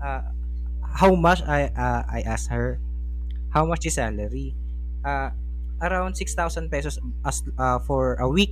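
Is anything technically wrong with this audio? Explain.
Yes, there is mains hum throughout the clip: a steady 60 Hz tone with low harmonics, nearly as loud as the speech. Power-line current has leaked into the signal path through a ground loop or nearby transformer, leaving a constant buzzing drone under everything.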